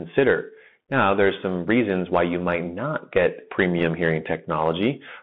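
From the start, the whole clip is squeezed through what sounds like a Bluetooth CVSD headset codec, which fits a 64 kbps CVSD stream. The speech sits in a narrow telephone band of roughly 150 Hz to 3.6 kHz, with nothing on top. CVSD only tracks the waveform one up-or-down bit at a time, so the step size can't keep up on sharper sounds. That gives scratchy sibilants, strained peaks and a grainy hiss under everything, and it's plainly audible.

Right after "you might not get", from about 3.78 to 3.85 s, there's a short burst of bit errors on the Bluetooth voice link. Flipped bits in a CVSD stream each nudge the waveform only slightly, and the decoder recovers quickly. So instead of a sharp click you hear a brief rushing crackle laid over the speech. The error rate looks to be around one percent.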